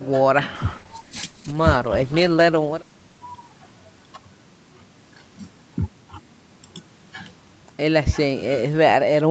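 From 0.56 s to 4.25 s there is a call bitrate drop. The encoder was starved of bits, so the speech turns rough and watery. The sound points to Opus falling from about 64 kbps to 13 kbps, bottoming out for 1.88 s.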